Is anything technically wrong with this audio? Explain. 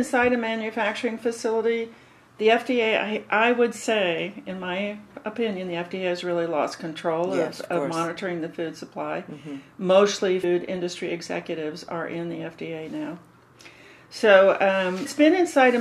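Yes. Damaged data in a compressed stream shows up twice: a brief blip at 10.43 s and another from 15.05 to 15.07 s. Corrupted bytes make the decoder misread those frames and hunt for the next valid header, producing short glitches.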